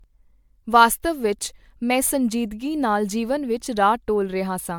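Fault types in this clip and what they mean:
Generation loss: throughout, the speech sounds swirly, hollow and smeared, with blurred attacks, more damaged than a single MP3 encode at about 128 kbit/s would explain. This is likely from repeated decoding and re-encoding, around seven passes, each adding fresh quantisation noise and spectral holes.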